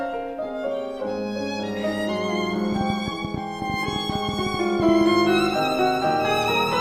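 From 2.73 to 5.02 s there's a train of clicks, about 10.1 per second at an uneven pace, roughly twenty in all, standing out around 10 dB above the sound. It ticks away on top of everything, likely interference or a faulty connection or supply.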